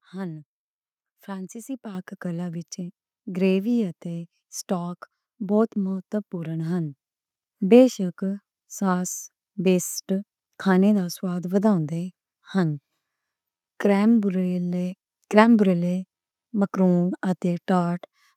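At 1.95 s, right before "کلا وچ", there's a microphone volume step-up: the speech and the background noise both jump by about 8 dB at the same instant. That's the call software deciding the mic was too quiet and bumping the device's input volume in one go rather than easing it up. Because the room noise rises along with the speech, it sounds like someone turned a knob, not like the talker getting louder.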